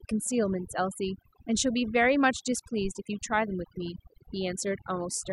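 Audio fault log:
throughout – overdone noise removal: The speech sits over a background pushed down, dotted with brief twinkling specks where isolated frequency bands flicker on and off. The reduction is set so hard that any band near the noise estimate is cut deep or removed, and the softer parts of the voice fall below that threshold too. Unlike a simple gate, which shuts the whole signal at once, this works band by band, hence the chirping residue.
2.85–2.93 s – phantom power thump: A deep, low thump lasting about 0.08 s, with a decay of 19 ms, the mark of a supply voltage switched on a live input and the sudden step passing through the coupling capacitors. What separates it from a handling bump or a plosive pop is its character: a single electrical step with a smooth, fast decay, rather than mechanical rumble or breath noise tied to the speech.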